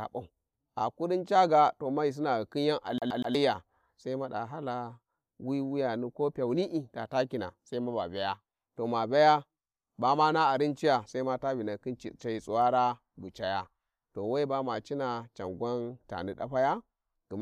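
CD stuck on one turn, from 2.98 to 3.35 s: a scratch on the disc makes the laser jump back one track at the same point on each rotation, so a slice of speech about 121 ms long plays three times in a row. Each jump brings a brief mute before the slice restarts, giving the fast, even stutter of a skipping CD before playback moves on past the damaged spot.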